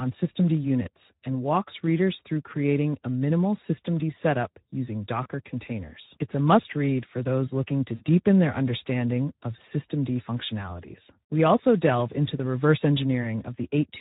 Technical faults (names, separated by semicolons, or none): Speex codec; VoIP packet loss concealed by the speech codec